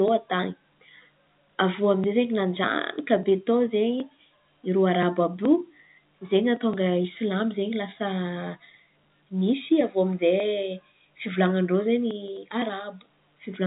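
The speech carries no audible technical faults.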